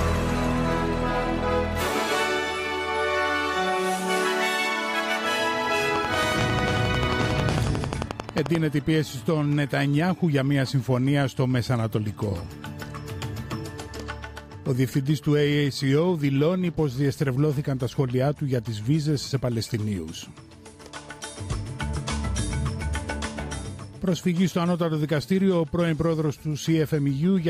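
From 5.96 to 8.56 s, a regular train of clicks ticks well above the sound, about eleven per second, likely from interference or a faulty connection.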